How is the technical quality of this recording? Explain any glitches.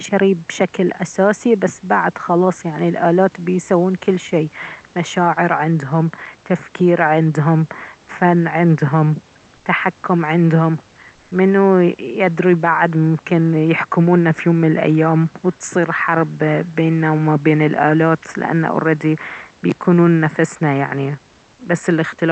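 There is one brief glitch in this speech, heard through a call codec with a top end near 8 kHz. At 9.57 s, between "تفكير عندهم فن عندهم" and "تحكم عندهم منو يدري", the background turns flat for 80 ms and drops about 2 dB. This is likely comfort noise in place of the background. The sender paused transmission, and the receiver filled the gap with synthetic noise.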